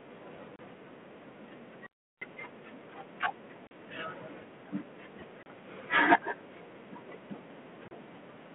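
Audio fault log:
0.56, 3.67, 5.43, 7.88 s: packet loss on an ADPCM call. Each hole lasts 30 to 40 ms. The decoder's predictor loses step, so speech returns with brief distortion.
1.86 to 2.22 s: audio dropout to a faint residue. Speech cuts out abruptly for about 350 ms, leaving faint sound about 35 dB down. The likely cause is a broken signal ahead of a path that stayed live.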